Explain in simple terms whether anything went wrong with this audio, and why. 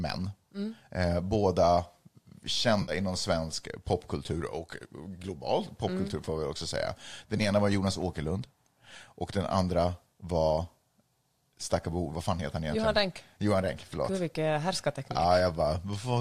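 Two brief glitches in this speech come from AAC frame loss with concealment, probably over a low-delay AAC link. Around 2.82 to 2.92 s a chunk dropped out and the decoder guessed from the last good sound, giving a smeared, noisy patch. A shorter one at 7.38 to 7.41 s is a briefer patch of the same kind.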